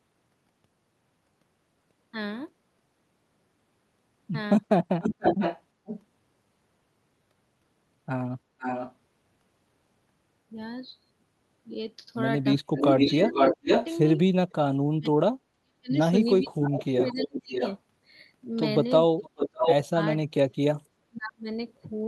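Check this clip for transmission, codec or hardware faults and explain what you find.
The clip has two faults, both on the far end's hands-free path: echo leak and speech suppressed in double talk.

Echo leak, at 5.01–6.0, 8.59–8.94, 12.76–14.52, 16.63–17.78 and 19.22–19.75 s, is likely from an echo canceller missing loudspeaker pickup. It returns the speech delayed 484 ms, then 595 ms, at about 10 dB below to equal level.

Speech suppressed in double talk, at 12.6–17.61 and 19.56–21.47 s, is likely the canceller muting overlapping talk. The speech drops out for roughly two seconds and one second in total, by up to about 40 dB and 35 dB.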